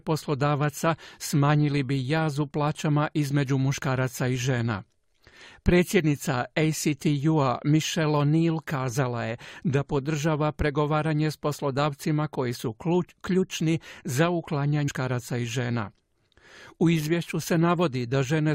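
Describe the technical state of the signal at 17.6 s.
At 17.6 s the speech signal is intact, with no audible fault at that point.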